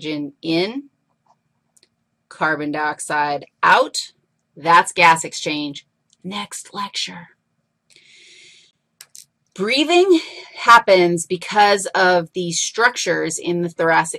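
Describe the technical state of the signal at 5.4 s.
At 5.36 s there is a block of digital silence: for about 1.9 ms the signal drops abruptly to silence without a fade, heard as a brief tick.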